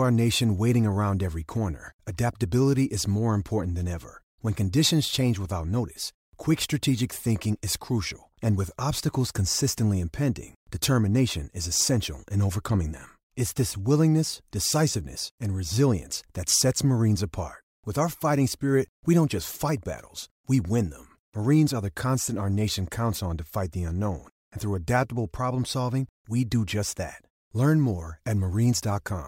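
No faults are audible anywhere in this recording.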